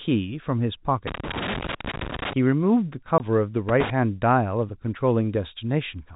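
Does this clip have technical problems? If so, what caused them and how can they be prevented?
Yes. Loose connector crackle appears from 1.07 to 2.33 s and again from 3.69 to 3.90 s. A worn or dirty contact is making and breaking as it moves, chopping the signal on and off and adding pops from any DC on the line, so the speech is overlaid with irregular scratching. On a waveform these stretches show jagged spikes and breaks in the envelope. A spectrogram shows scattered vertical streaks running up to the telephone band's 4 kHz ceiling. Cleaning or replacing the connector and securing the cable would prevent it.

A packet loss filled with silence cuts the audio from 3.18 to 3.20 s. A 20 ms piece of the stream never arrived, and the receiver played nothing in its place. The length fits a single lost 20 ms packet. It is heard as a brief hole with hard edges. A waveform shows a flat gap with abrupt cut-offs, and a spectrogram shows a thin blank column. 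Jitter buffering with packet-loss concealment would prevent it.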